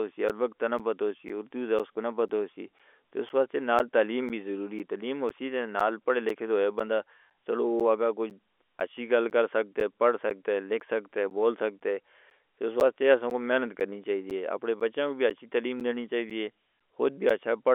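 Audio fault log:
0.29 to 17.3 s, periodic USB or driver dropouts: every 0.5 s the audio path stalls and around 10 ms of sound is replaced by silence, about forty times in all, giving a steady ticking beat under the telephone-band speech. On the waveform each loss is a narrow flat gap with abrupt edges. On the spectrogram it shows as a thin vertical stripe that flashes broadband energy up to the line's 3.8 kHz ceiling.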